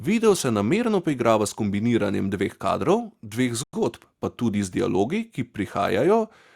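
At 3.63 s the speech drops to silence for 100 ms, then resumes at 3.73 s, which sounds like a Bluetooth stall, likely from interference starving the headphones' buffer.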